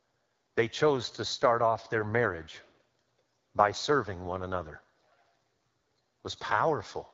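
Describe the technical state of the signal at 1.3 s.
At 1.3 s the speech carries AMR wideband (HD Voice) codec damage, present throughout the clip. Its rough, raspy texture fits one of the lowest rates, around 8.85 kbit/s. On a spectrogram, harmonics end near 6.4 kHz, with structureless noise filling up to a hard 7 kHz ceiling.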